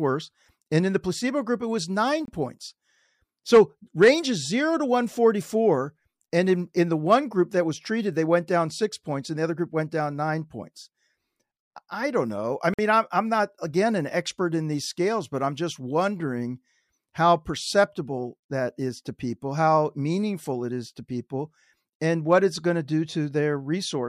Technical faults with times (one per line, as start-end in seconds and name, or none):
2.25-2.28 block of digital silence
12.74-12.79 block of digital silence